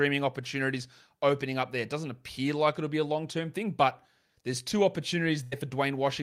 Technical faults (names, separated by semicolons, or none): burst of packet loss